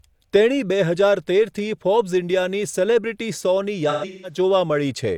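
Between 3.89 and 4.38 s, AAC frame loss with concealment sets in. Roughly 300 ms of coded speech goes missing across a span of about 340 ms, which fits several frames dropping out in clusters. The decoder patches each gap by reusing the last good spectrum with scrambled signs or interpolated energy, so the speech turns smeared and noisy and takes on a phasey blur. The longest run lasts around 150 ms before real frames return.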